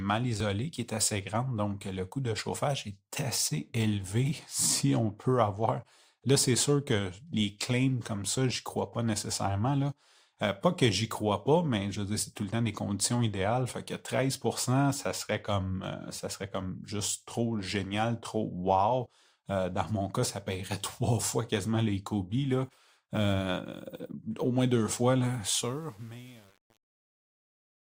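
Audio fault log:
25.49–27.84 s, truncation distortion on a fade: the level falls smoothly, but the fade is computed without dither at a resolution that fits 8 bits, so the decaying waveform collapses into coarse square steps and the quiet end turns gritty.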